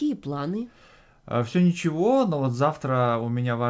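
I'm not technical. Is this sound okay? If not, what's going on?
Yes, this sound is okay; it's speech that came through an ordinary internet call connection, which leaves out the very highest tones.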